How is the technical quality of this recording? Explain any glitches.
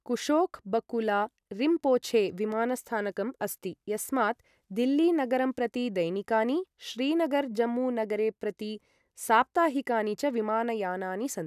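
No technical glitches can be heard anywhere in this speech recording. Nothing interrupts or disturbs the audio at any point.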